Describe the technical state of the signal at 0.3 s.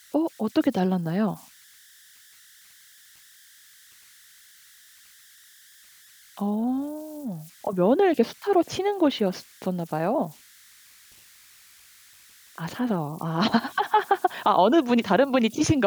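Converter idle tones are present at 0.3 s, as they are throughout the clip. With too little dither, the delta-sigma converter settles into repeating bit patterns on low-level speech, leaving a whistle around 1.5 kHz and grainy noise about 30 dB below the signal.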